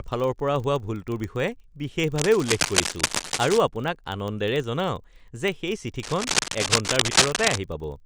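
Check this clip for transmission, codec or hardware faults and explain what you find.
Two faults are present: a steady block-rate buzz through the whole speech clip and two stretches of scratchy noise.

The buzz comes from a filter restarted on every block. It runs the full length at 25 Hz, so the blocks are 40 ms long. Because the filter drops its memory at each boundary, every block opens with a small transient as it settles from silence. Those ticks stack into a low, rough buzz that rises and falls with the speech level.

The cable scratch noise shows up twice, from 2.18 to 3.58 s (ending just before "আপোনাক আনন্দেৰে") and again from 6.03 to 7.59 s. Both are dense, uneven rustling bursts sitting about as loud as the speech itself. The likely cause is a worn cable, connector or control being moved, so its contact resistance jumps around rapidly and injects crackly noise for as long as the movement lasts.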